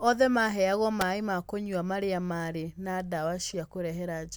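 At 1.01 s there's a sharp snap sitting on top of the speech, over in about a hundredth of a second. That's an electrical switching spike. It's most likely a nearby switch, motor or bit of static arcing briefly and the audio line catching that pulse. It's an added click riding over the voice, very tight and bright, with nothing smeared around it.

Then at 3.49 s, running to about 3.54 s, you get a short glitch of wrong-sounding energy. That's a corrupt frame decoded. Flipped bits in the compressed stream got played anyway, so the decoder put gains and spectral content in the wrong places for roughly a couple of frames' worth, about 55 ms. The error peaks at around -30 dBFS, and it doesn't belong to the speech.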